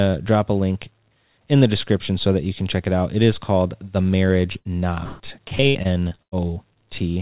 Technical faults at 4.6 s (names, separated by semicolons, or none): short concealed packet loss; burst of packet loss